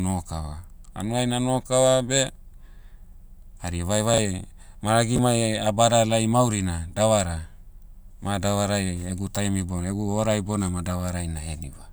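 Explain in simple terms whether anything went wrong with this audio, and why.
Two brief glitches in the speech come from chunks out of order. Around 4.14 to 4.18 s, a slice of audio about 11 ms long plays three slices later than it should. Around 5.16 to 5.18 s, another slice plays one slice late. Nothing goes missing, but each reshuffle puts sound out of sequence and leaves three abrupt joins, so each moment comes across as a tiny jumbled blip.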